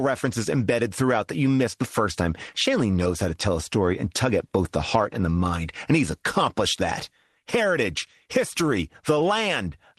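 No technical faults are audible.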